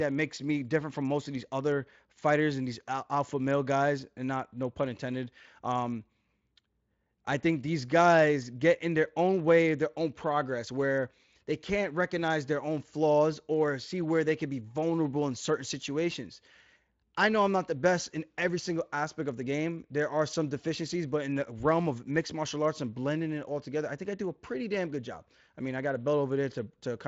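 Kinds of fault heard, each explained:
No faults are heard anywhere in this recording.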